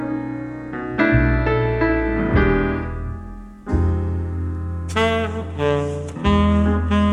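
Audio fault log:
3.30–5.65 s, sample clock jitter: A fine hiss and roughness rides on the sound here. The converter's clock wanders by around a microsecond or two. Each sample lands slightly early or late. Where the waveform moves fast, that timing slip becomes an amplitude error. The error sits roughly 45 dB below the signal. It grows on loud, bright passages and drops away in quiet moments. The grit therefore follows the sound instead of forming a steady noise floor.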